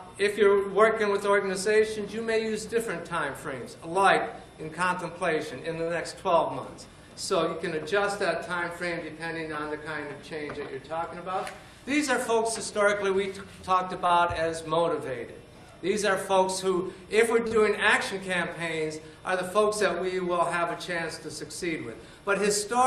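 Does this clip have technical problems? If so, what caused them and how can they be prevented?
Yes. Short stalls from a late packet occur at 5.83–5.89 s, 14.06–14.21 s and 17.47–17.53 s. Each time a packet arrived late, the jitter buffer ran empty, and the receiver stretched the last sound for 36, 34 and 41 ms, so the audio briefly hangs. On a spectrogram these appear as short, horizontally frozen bands, and the waveform shows one periodic cycle repeated. A deeper jitter buffer or a steadier network path would prevent them.

A jitter buffer speed-up runs from 11.09 to 11.50 s. After excess audio built up in the buffer, the receiver repeatedly cut out pitch-period-sized pieces, removing about 50 ms and playing at 110% speed with unchanged pitch, so the sound feels hurried. The waveform looks squeezed in time while spectrogram harmonics stay at the same height. More consistent packet delivery, or a gentler adaptive playout policy, would avoid it.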